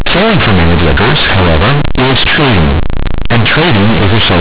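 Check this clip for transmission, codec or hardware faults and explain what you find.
The clip has one fault, present for its whole length: companded audio read as linear.

The speech was coded as A-law G.711 at 8 kHz, but the bytes are played as plain linear 8-bit samples with no expansion. Each sign change throws the output across roughly half its range, so quiet sounds reach the same size as loud ones. The result is loud, harsh, buzzy distortion with heavy noise in the pauses. On a waveform the trace looks like a dense block with no quiet gaps. On a spectrogram, broadband noise fills the pauses up to the 4 kHz limit.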